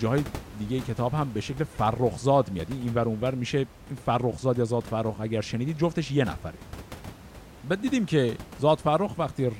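Nothing has gone wrong with the system in this speech recording, and the only thing to hear besides the talking is the room's own background noise, sitting about 18 dB below the speech.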